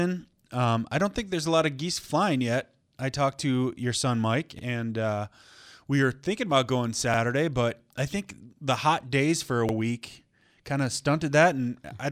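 Overlapping chunks at 2.04, 4.59, 7.14 and 9.69 s: the speech was handled in blocks of 2.5 s, and each block began before the previous one had finished, so about 50 ms of audio plays twice at every seam. This is heard as a brief stutter or click, first after "a lot of geese", then before "and uh", again at 7.14 s, and finally after "hot days for a".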